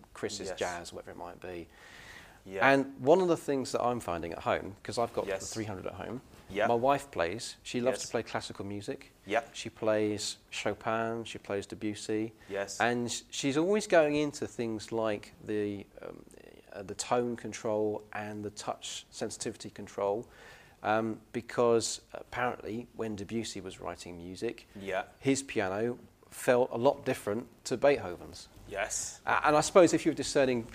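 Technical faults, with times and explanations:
Nothing stood out on listening to this clip.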